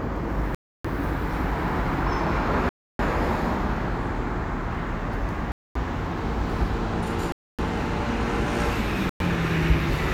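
The sound drops to dead silence five times, at 0.55, 2.69, 5.52, 7.32 and 9.09 s, for roughly 0.1 to 0.3 s each before resuming. That's likely a Bluetooth stall: interference delayed packets, the headphones' buffer emptied, and playback waited for resends.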